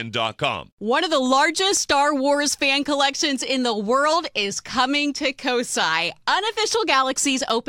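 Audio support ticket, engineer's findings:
Three regular ticks, well under a millisecond each, 1.38–1.77 s. CD scratch ticks: disc blemish exceeding error correction once per rotation; player interpolating or muting damaged samples.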